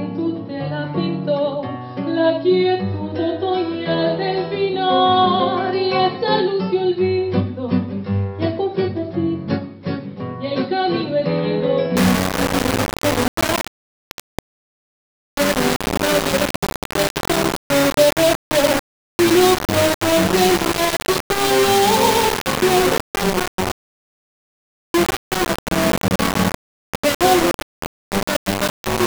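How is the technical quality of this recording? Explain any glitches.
The opening is clean, but from about 11.96 s to the end at 29.07 s the sound turns coarse and grainy. That's likely low bit depth without dither. The level steps sound as coarse as about 3-bit rounding, and the error comes out nearly as loud as the signal. Because nothing decorrelates the rounding, the grit tracks the sound itself, turning gritty on quiet parts and sputtering or cutting out on the quietest ones.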